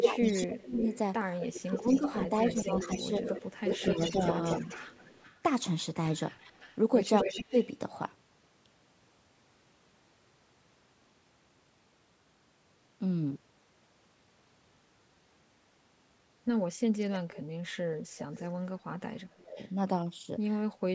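Speech suppressed in double talk, 0.0 to 4.2 s: the voice dips by up to about 20 dB, for roughly one and a half seconds in total, likely because both ends spoke at once and the echo canceller, unable to separate the local talker from loudspeaker echo, turned everything down.

Echo leak, 0.0 to 5.38 s: a delayed copy of the voice arrives 247 ms late at about 10 dB below it, likely from a loudspeaker whose pickup the canceller failed to remove fully. It returns from 6.38 to 7.67 s at 253 ms, now only about 5 dB down and clearly audible.

Within that stretch, speech suppressed in double talk again cuts the voice by about 15 dB from 7.24 to 7.55 s, likely the canceller ducking while both sides overlap.

Echo leak recurs from 17.14 to 18.46 s with a 266 ms delay, a faint trace about 20 dB down.

Speech suppressed in double talk, 19.31 to 19.59 s: the deepest dip, about 30 dB, nearly muting the voice.

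A last scrap of echo leak at 19.6 to 19.7 s, 268 ms delayed, sits about 35 dB down, barely perceptible.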